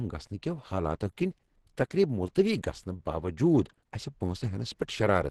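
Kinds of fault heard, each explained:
Opus compression: throughout the clip, the speech sounds muffled, hoarse and grainy, with nothing above about 12.1 kHz. This is likely low-rate Opus encoding. With too few bits, the codec narrows the band and leans on its speech-oriented hybrid mode, which models the lower range and fills the upper bands coarsely instead of leaving holes. The heavy roughness suggests a very low bitrate, around 12 kbps.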